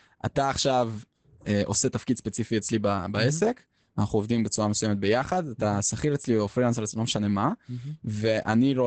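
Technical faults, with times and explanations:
Throughout, Opus voice compression: nothing is present above about 8.8 kHz, which fits the wideband SILK linear-prediction mode. The speech is plainly muffled, hoarse and slightly robotic because the band is limited and the excitation is coded coarsely, consistent with a bitrate around 12 kbps.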